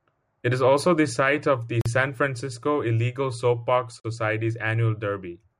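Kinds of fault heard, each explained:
Block of digital silence: the speech cuts to silence for 43 ms at 1.81 and 4.00 s. The waveform flatlines, and the spectrogram shows blank vertical stripes.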